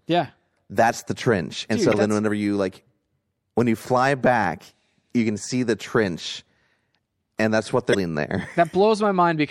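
Throughout, the speech has a watery, swirling quality with dulled treble and smeared consonant attacks, the mark of MP3 compression, likely at about 64 kbps. Its steady, frame-to-frame flicker distinguishes it from noise reduction, which pumps with level instead.

From 1.92 to 1.94 s, just before "then whenever you like", and from 7.91 to 7.95 s, right after "and that's what", brief glitches reveal damaged data in a compressed stream. The decoder lost sync and jumped to the next frame header.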